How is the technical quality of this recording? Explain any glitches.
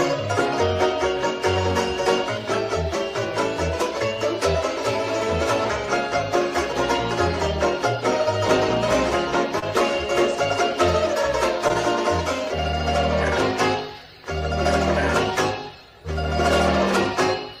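Two brief glitches, both short concealed packet loss, at 9.59–9.64 s and 11.68–11.71 s. Roughly 20 ms went missing each time, and the receiver extended the preceding sound to bridge it. The result is a tiny smear or wobble rather than a silent gap.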